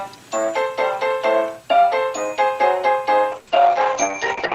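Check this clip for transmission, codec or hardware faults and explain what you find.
There is one codec fault. Call bitrate drop, 3.33 to 4.55 s: the encoder's budget falls from 32 to 8 kbps, coarsening the coding and cutting bandwidth from 20 kHz to 8 kHz, so the sound turns rough and muffled.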